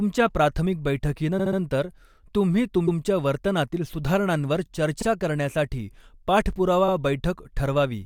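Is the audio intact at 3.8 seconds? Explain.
Yes, the speech at 3.8 seconds is intact, with no dropout, click, distortion or other fault to be heard at that moment.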